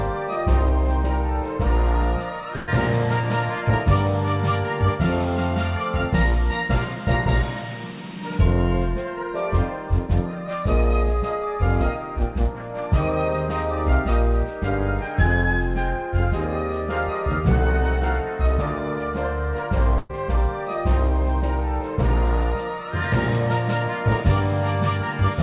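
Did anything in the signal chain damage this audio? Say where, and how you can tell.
Yes, at the network stage: a burst of packet loss at 2.56–2.69 s and again at 19.98–20.13 s. Each time about 120 ms of audio is lost, and the receiver stretches the last sound, fading it out, before jumping ahead. A spectrogram shows a smeared, dimming stretch, then an abrupt restart.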